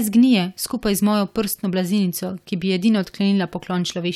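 Speech recording, no technical faults detected.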